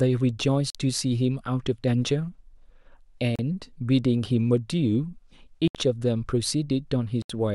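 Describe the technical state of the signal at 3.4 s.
A Bluetooth stall cuts the speech to silence for 34 ms, from 3.36 to 3.39 s, likely because the receiver's buffer emptied while packets delayed by interference were resent.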